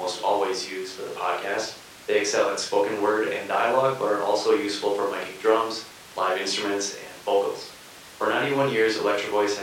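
No technical faults occur at any point in this speech recording, so there is nothing to describe in time order.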